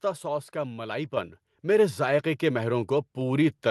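A speech clip where, at 1.17 s, voice and background together jump abruptly louder by about 6 dB and stay there. This is a microphone volume stepped up fault: the call software judged the input too quiet and raised the device gain in a single step. The sound has passed through a call codec path, which limits the top end to about 12 kHz.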